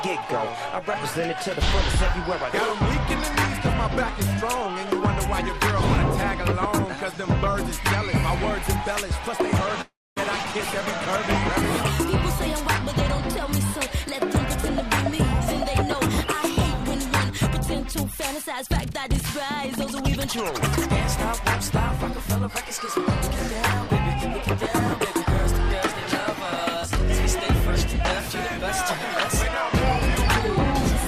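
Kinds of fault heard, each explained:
call audio freeze: From 9.81 to 10.18 s the sound stops moving forward; the last sound is stretched into a fading buzz or hiss that drops to about 250 ms of silence, 351 ms of fill in all. When it resumes it picks up exactly where it stopped, so nothing is lost and the audio now runs 351 ms later. The likely cause is packets held up in transit, which emptied the jitter buffer.
jitter buffer speed-up: Three stretches play faster at unchanged pitch as short pitch-period slices are repeatedly cut out to shrink excess buffered delay. From 18.11 to 20.01 s the rate is 108%, removing about 150 ms, and this passage sounds audibly hurried. From 21.40 to 23.12 s it runs at 104% and from 23.87 to 26.77 s at 102%, each trimming about 70 ms, for roughly 0.3 s recovered in total.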